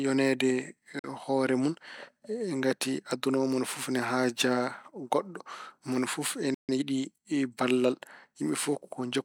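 A speech clip with three timing faults. From 0.99 to 1.10 s a Bluetooth dropout cuts a hole, likely from wireless packets arriving too late, which fits roughly three lost packets. Speech picks up further along, about 46 ms of it skipped, rather than where it broke off, which separates it from a stall. Right after "goɗɗo mone fof", a playback stall silences the output from 6.54 to 6.69 s, about 0.14 s, likely because the player briefly ran out of data or was blocked. Unlike the dropout, nothing is skipped: the speech resumes exactly where it halted. From 6.69 to 6.83 s comes time-compressed catch-up, as the player clears its backlog by splicing out small pieces and cross-fading the joins. The speech runs at 2.0 times its normal rate, but its pitch stays put, unlike simply playing the audio faster.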